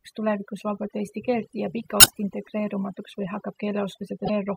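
Overdone noise removal runs through the whole speech clip: the noise reduction is set so hard that any frequency band near its noise estimate is pushed almost to silence, taking quiet parts of the voice along. The background becomes a near-silent bed of twinkling specks. From 1.97 to 2.11 s, just after "vabalt eesti keelt jääb", damaged data in a compressed stream makes the decoder misread frames and lose sync until it finds the next frame header, producing a short glitch. A second corrupted stretch from 4.22 to 4.30 s gives a briefer glitch.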